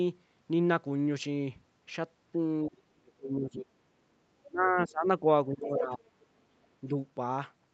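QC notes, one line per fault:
2.68–3.69 s, 4.47–5.24 s and 5.47–6.05 s, speech suppressed in double talk: the voice sinks hard, about 30 dB at its worst in the first stretch and about 20 dB in the other two, likely because the echo canceller couldn't tell the talker from the far end and pulled both down.
4.43–4.48 s and 6.22–6.26 s, other side's voice leaking through: brief scraps of a second voice slip in, roughly 25 dB under the talker the first time and around 35 dB under the second, likely loudspeaker echo the canceller didn't fully remove.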